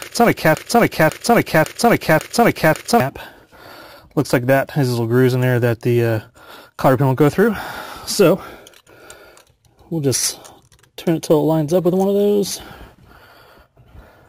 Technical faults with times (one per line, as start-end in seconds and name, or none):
0.00-3.00 broken-record loop